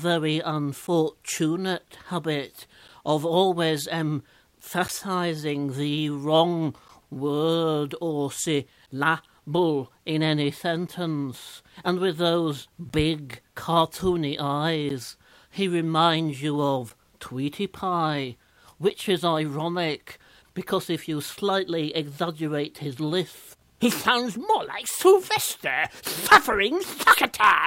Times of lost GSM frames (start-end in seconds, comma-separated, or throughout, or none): none